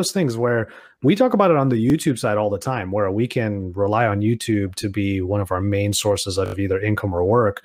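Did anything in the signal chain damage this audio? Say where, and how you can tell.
Yes: a repeated buffer at the driver or buffer stage, where late audio made the device replay its last block. At 1.90 s, after "about it on the", a 20 ms piece sounds twice with a hard join. At 6.46 to 6.54 s, after "of our main sources", it loops four extra times, which fits a 20 ms buffer.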